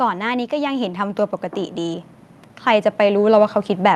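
Automatic gain rising shows up twice in this short speech recording, from 0.49 to 2.14 s and again from 2.65 s to the end. The gain control judged the input too quiet and turned itself up gradually, by about 5 dB in the first rise, so speech and background noise swell together rather than the talker getting louder. The audio also passed through a call codec whose top end stops near 12 kHz, consistent with Opus at a moderate bitrate.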